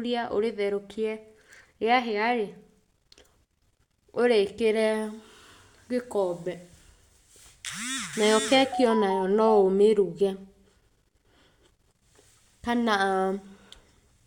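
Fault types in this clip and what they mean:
Nothing stood out on listening to this speech clip.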